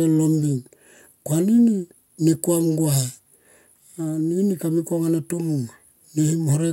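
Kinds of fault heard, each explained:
No technical faults detected.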